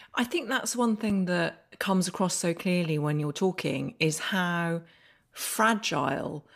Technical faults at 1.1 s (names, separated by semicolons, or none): block of digital silence